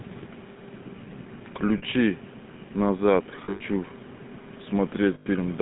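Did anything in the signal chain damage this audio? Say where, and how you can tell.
Yes. Throughout, the speech has a buzzy, gravelly roughness and a narrow line band of 150 Hz to 3.7 kHz, with nothing bright above it. This is damage at the codec stage, the GSM full-rate codec. It models the vocal tract and drives that model with a sparse, regularly spaced pulse excitation, which leaves the voice grainy and plainly coarsened. The roughness fits a 13 kbps speech coder rather than a wideband path.

Three times the sound sticks on a rough, metallic ring instead of moving on: at 1.78 to 1.83 s for about 40 ms, at 3.44 to 3.61 s, and at 5.14 to 5.27 s for about 120 ms. The middle event is broken up over about 160 ms, with the longest held stretch near a tenth of a second. These are lost GSM frames at the network stage. The decoder fills each gap by repeating the last good frame's settings at falling level, which freezes the sound into that metallic hold. 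The lengths fit runs of 20 ms frames.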